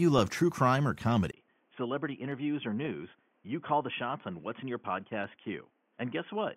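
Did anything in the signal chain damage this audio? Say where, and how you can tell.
Yes: at 1.31 s a brief gap precedes duller, slightly quieter sound capped at 3.4 kHz, likely an input switched to a poorer device; the spectrogram's upper band vanishes there.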